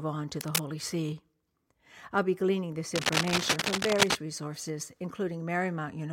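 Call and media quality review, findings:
Cable scratch noise, speech track: scratchy rustling bursts at 0.41–0.63 s (about level with the speech) and 2.95–4.16 s (louder than the speech). Likely a worn cable or connector being moved, contact resistance jumping around and spraying uneven noise into the signal.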